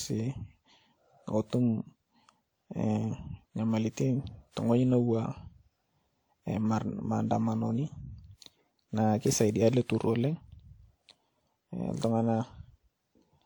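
Throughout the speech there is generation loss. The sound is swirly and hollow, with a smeared quality and blurred consonant attacks. Content reaches up to about 20.1 kHz, so the bandwidth is not the problem. The likely cause is repeated lossy coding, perhaps around seven passes through a WMA-style encoder at a rate near 96 kbit/s. Each pass requantises on a shifted frame grid. Noise builds up beyond what one encode would leave.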